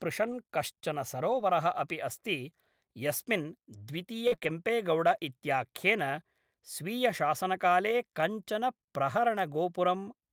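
Right at 0.31 s there's a brief rough patch, about 20 ms, which fits a single lost packet rebuilt from error correction. The packet behind it carried a low-bitrate copy, and the decoder played that instead of leaving a hole. The same happens at 1.31 to 1.41 s, this time with 60 ms rebuilt, so it sounds like several separate frames. Again at 8.21 s there's one short 20 ms blip. None of these leave a gap. You just hear the speech go grainier and noisier for a moment, because the backup copy is coarser than the original.

From 4.27 to 5.23 s we get repeated packet loss. There are four separate holes, the longest about 41 ms, and roughly a tenth of that stretch is concealment rather than real audio, around 100 ms in all. Each time, the decoder stretches out the last bit of sound to cover the hole, and the next dropout arrives soon after. So the speech comes out choppy, with little pieces clipped out.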